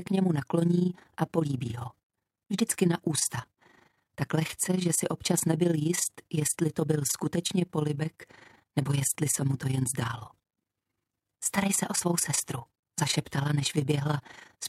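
Overlap-add ripple runs through the whole sound: level pulses about 11 dB around thirty times a second, a robotic flutter seen as regular waveform envelope scalloping and vertical spectrogram banding.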